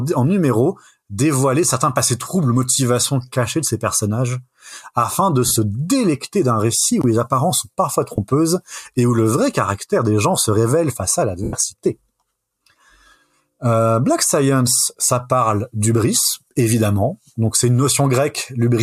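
Lost LE Audio frames break up the sound at 5.48–5.56 s, after "ces personnages afin de", in scattered gaps. Another comes at 8.16 s, after "les apparences sont parfois". The longest, 90 ms, starts at 11.44 s, after "se révèle face à". Each gap is refilled from the last spectrum with shuffled signs. It sounds like a noisy smear.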